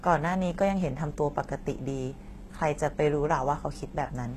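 A speech recording whose s sounds come through gritty and metallic throughout, with plainly audible coding damage and no content above 12.3 kHz. The likely cause is HE-AAC compression, consistent with a bitrate near 16 kbps, its treble rebuilt from copied lower bands rather than the original.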